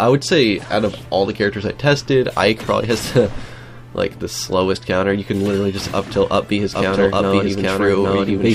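From 6.73 s to the end, a doubled audio track appears. A second full-band copy, about as loud, trails roughly 0.7 s behind, starting abruptly. A duplicated capture path is the likely cause.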